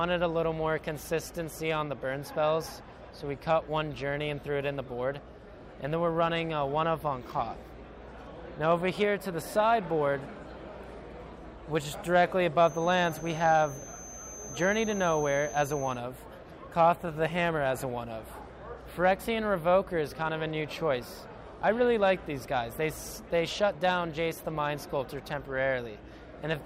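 A feedback whistle runs from 12.56 to 16.03 s. It is a thin, steady 6.2 kHz tone, well below the main sound. It is likely a speaker-to-microphone loop held just short of runaway.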